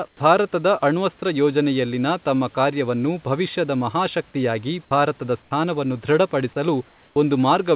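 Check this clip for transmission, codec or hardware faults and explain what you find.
The speech shows discontinuous-transmission faults on a narrowband call path with nothing above 4 kHz, which fits G.711.

Comfort noise in place of the background appears at 0.08 to 0.20 s, 5.42 to 5.51 s and 6.89 to 7.16 s. The real room noise turns into flat, featureless hiss, about 6 to 12 dB quieter. This is likely the receiver filling pauses the sender stopped transmitting. Unlike a dropout, the noise floor continues rather than going dead.

An onset clipped by the voice detector occurs at 0.18 to 0.20 s, just before "ಭಾರತದ ಅಣ್ವಸ್ತ್ರ ಯೋಜನೆಯಲ್ಲಿನ ತಮ್ಮ", and again at 7.13 to 7.16 s. Speech begins abruptly, missing 20 to 30 ms, likely because the detector reacted late. Unlike a gain fault, only the soft beginning is lost.

Sound dropped by the voice detector happens at 4.85 to 4.91 s, after "ತಮ್ಮ ಕಾರ್ಯವನ್ನು ಭವಿಷ್ಯದ ಮಹಾಶಕ್ತಿಯಾಗಿ". 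About 40 ms of speech gives way to steady noise, likely because the detector mistook the sound for background.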